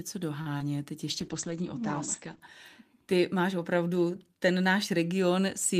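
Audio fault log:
0.41–0.48 s, short stall from a late packet: a packet arrived late and the jitter buffer ran dry, so the receiver held the last sound for about 44 ms until it came in, then resumed without losing anything. Everything after plays 44 ms later. It is heard as a sound held slightly too long with a faint buzz or dip. A spectrogram shows frozen, smeared harmonics across that stretch. The waveform shows a repeating, slightly decaying cycle where the signal should have changed.
0.58–0.62 s, short concealed packet loss: about 20 ms of audio never reached the decoder. The receiver filled the gap by extending the preceding sound and then blended back into the real signal. The result is a brief smear or wobble in the speech. On a spectrogram the gap appears as a blurred patch where harmonics continue flatly and then rejoin. The waveform shows a short, overly regular section.
1.1–2.5 s, call bitrate drop: the bandwidth estimate fell, and the encoder went from 32 to 11 kbps, staying at the lowest rate for about 1.3 s. 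At that rate the coded bandwidth narrows from 20 kHz to 8 kHz, so the speech turns muffled and rough or watery, with sibilants dulled. A spectrogram shows a hard ceiling near 8 kHz with empty space above it, and coarser, patchier detail below.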